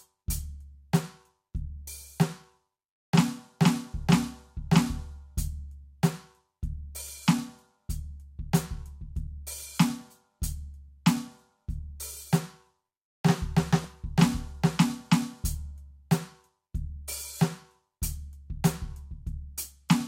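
DAB burbling at 9.96–10.23 s, 13.84 s and 17.08–17.18 s: bit errors corrupt MP2 sub-bands, giving short blips of noise in single sub-bands over the music rather than clean dropouts.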